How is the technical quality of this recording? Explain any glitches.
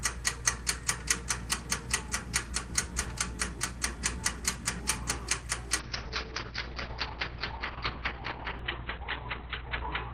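The recording degrades partway through. From 5.81 s to the end, a call bitrate drop takes the encoder from 32 kbps down to 7 kbps. It holds at the lowest rate for about 4 s and narrows the audio band from 20 kHz to 4 kHz. The sound turns muffled and watery. On a spectrogram, everything above 4 kHz disappears behind a flat ceiling, and the remaining content looks smeared and blocky.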